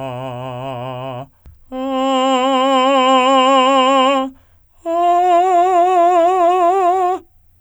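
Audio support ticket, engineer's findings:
Listened to the full music clip and nothing stood out as a problem.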